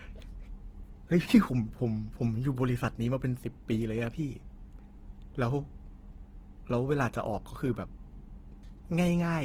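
Throughout the speech, the sound is grainy and rough, with noisy texture filling the bands instead of the swirling holes MP3 leaves. This is likely Opus compression in its CELT music mode, keeping each band's energy but substituting folded or noise content, at a rate that fits about 16 kbps, with bandwidth still reaching 20.3 kHz.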